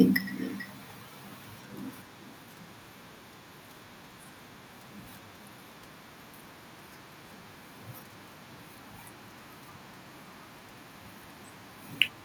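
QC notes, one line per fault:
Throughout: echo with no canceller. Each phrase returns roughly 0.4 s later, about 14 dB quieter and thinner, picked up from the far loudspeaker.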